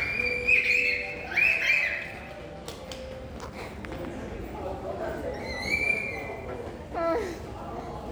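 No technical faults can be heard anywhere in these sounds. From the first moment to the last, nothing in the audio points to a problem anywhere along its path.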